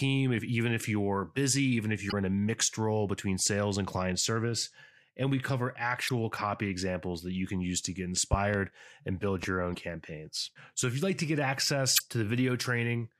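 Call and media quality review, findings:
Damaged data in a compressed stream: brief glitch at 2.08–2.13 s, 6.05–6.10 s, 9.71–9.76 s, 11.95–12.01 s, each about 55 ms. Decoder misreads corrupt frames, loses sync and resyncs on the next header. Spectrogram shows short broadband smears with a visible discontinuity in the speech.

Loud pop: two sharp pops at 8.33–8.57 s, around 15 dB above the speech; single pop at 9.43–9.46 s, around 10 dB above. Likely a voltage step from a plug, switch or driver glitch, shaped by downstream circuitry. Waveform shows tall spikes over continuing speech.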